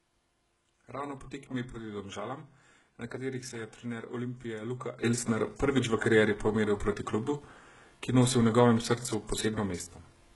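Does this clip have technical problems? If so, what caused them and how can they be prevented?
Yes. Throughout the speech, the signal was likely passed through HE-AAC compression at a very low bitrate, with heavy damage that points to something around 12 kbps. The codec encodes only the lower band and rebuilds the treble by copying lower bands upward under a coarse envelope, so the synthetic upper harmonics fail to line up with the real ones, s sounds turn gritty and lispy, and nothing remains above 11.5 kHz. Encoding speech at a higher bitrate, or with a plain AAC or Opus profile, would prevent this.

Sudden gain jumps occur at 1.44 s and at 5.04 s, likely from a gain setting applied instantly rather than ramped. From 1.44 to 1.54 s, the level drops by about 6 dB and then returns. From 5.04 s to the end, it rises by about 12 dB. Speech and background noise shift together each time, so the steps are abrupt and unnatural. 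Applying every gain change through a short ramp of a few milliseconds would prevent these jumps.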